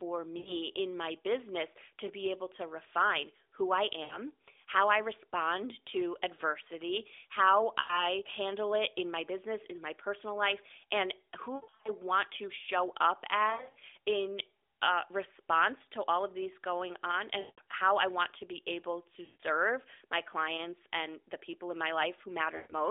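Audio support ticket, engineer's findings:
Lost AMR speech frames, 0.38–0.54, 4.04–4.18, 7.80–8.03 (after "respond to adversity how"), 11.56–11.89, 13.50–13.84, 17.40–17.61, 19.26–19.41, 22.56–22.74 s. Symptom: drawn-out, fading dropouts, 60–220 ms lost each; 11.56 and 13.50 are scattered short warbles. Component: AMR-NB decoder concealment. Radio errors failed frame checksums, so the decoder repeated the last pitch and vocal tract settings with decaying gain.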